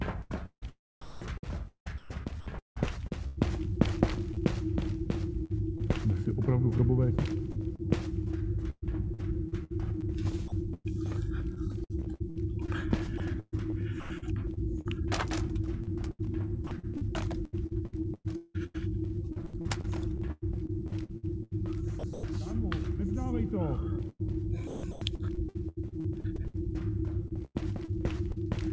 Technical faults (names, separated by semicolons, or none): sound chopped by the voice detector; sound dropped by the voice detector